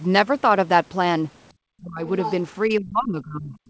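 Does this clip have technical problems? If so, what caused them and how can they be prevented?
Yes. The talker's speech is ducked from 1.79 to 2.03 s and again from 2.68 to 3.54 s, dropping by about 25 dB at its deepest. This is likely speech suppressed in double talk: the echo canceller, faced with both sides talking, attenuated the near end along with the echo. Tuning the canceller's double-talk detection, or using headsets, prevents it.

From 2.23 to 2.33 s a brief second voice comes through, about 10 dB below the main speech. This is likely the other side's voice leaking through: loudspeaker playback reached the microphone and the echo canceller left a residue. Better acoustic isolation or a headset avoids it.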